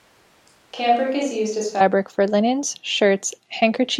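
A switch to a distant microphone covers the opening to 1.8 s, already under way as the clip begins, with the close microphone's signal likely missing. Speech sounds hollow, roomy and thin, about 5 dB quieter over faint room noise, until it snaps back close before "for linens".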